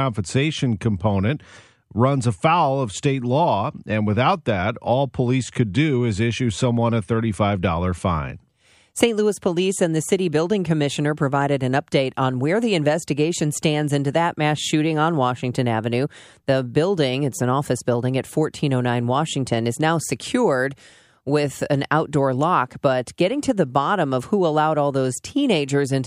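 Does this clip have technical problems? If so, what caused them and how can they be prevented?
No, there's nothing technically wrong to hear in this speech recording, so there's no cause to track down and nothing that needs preventing.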